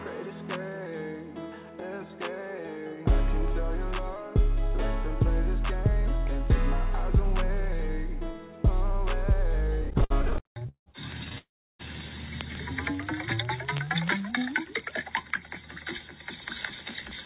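From 9.82 to 10.88 s the sound drags and catches in repeated stalls (stutter): eighteen brief holds, the longest 175 ms, fill about 0.44 s, nearly half the span. Packets kept arriving late, so the jitter buffer repeatedly ran dry and the receiver stretched the last sound until delivery resumed. A shorter burst of four tiny stalls, none over 12 ms, follows between 11.24 and 11.38 s.

Right after, from 11.38 to 11.81 s, comes a call audio freeze: the last sound hangs briefly, then about 0.32 s of silence, before the audio resumes where it left off, 0.41 s later. The likely cause is packets held up in transit, emptying the buffer.

Between 12.96 and 14.40 s the audio slows to about 93% speed at unchanged pitch, with drawn-out sounds adding roughly 106 ms. This jitter buffer slow-down comes from the receiver repeating single pitch periods to rebuild its reserve. Throughout, the WebRTC call path band-limits everything to below 4 kHz, which fits G.711 mu-law at 64 kbps.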